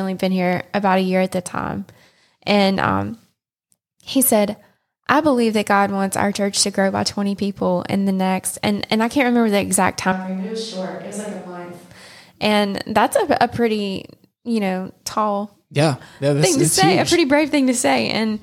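Right after "can't remember the exact", from 10.12 to 11.91 s, there's a switch to a distant microphone. The speech suddenly turns roomy and hollow, loses bass, drops roughly 10 dB and carries more room noise, likely because the close mic dropped out, then snaps back abruptly.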